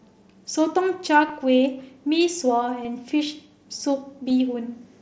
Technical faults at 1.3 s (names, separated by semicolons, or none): concealed Bluetooth headset packet loss